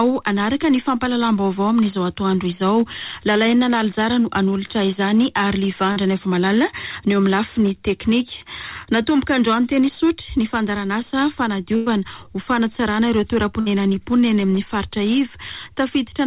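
At 5.92 to 5.98 s there is a short concealed packet loss. About 40 ms of audio never arrived in time. The receiver extended the preceding sound to cover the hole, then blended back. It comes across as a brief smear or wobble.

At 11.76 to 11.88 s a burst of packet loss takes out about 100 ms. The receiver stretched the last sound across the gap and let it fade, so a held buzz or hiss stands in. Audio resumes with that stretch gone. A shorter burst follows at 13.60 to 13.68 s, removing about 60 ms the same way.

Through all of this, the call path carries nothing above 4 kHz, which fits 64 kbps G.711 A-law coding.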